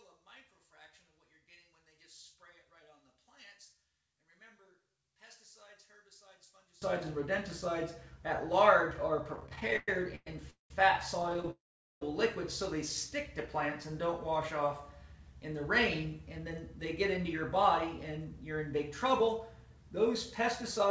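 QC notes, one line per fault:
0.0–6.8 s, one channel inverted: in mono the sound collapses by about 27 dB to a faint residue, likely from one stereo channel's polarity being flipped.
9.36–10.71 s and 11.20–11.49 s, repeated stalls (stutter): the sound drags and catches as the last sound is held through 13 and then 9 brief gaps, the longest 198 ms. The jitter buffer kept running dry, and nothing is lost.
11.51–12.02 s, call audio freeze: a 0.5 s hold fades and goes silent for 0.43 s, likely delayed packets emptying the buffer, before the sound resumes where it stopped.
13.91–14.65 s, jitter buffer slow-down: the sound stretches to 96% speed at unchanged pitch, with 38 ms added as repeated pitch periods to rebuild the buffer's reserve.
16.38–17.59 s and 18.17–19.41 s, jitter buffer speed-up: the sound hurries at 105% and 106% speed with pitch unchanged, as roughly 70 ms of pitch-period slices are cut each time to shed excess delay.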